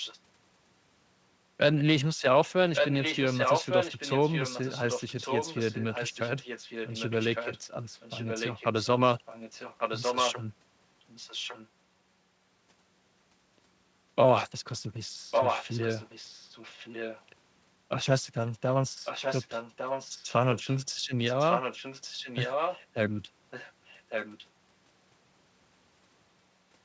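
Echo leak recurs through the speech, a delayed second copy trailing about 1.15 s behind. It sounds at 0.0 to 0.2 s, 2.74 to 10.35 s, 11.0 to 11.68 s, 15.31 to 17.24 s, 18.46 to 22.82 s and 23.5 to 24.46 s. The longer stretches sit about 5 dB below the direct speech. The short ones are fainter, about 10 dB down. A far-end loudspeaker's echo canceller likely let its microphone pickup slip back into the call.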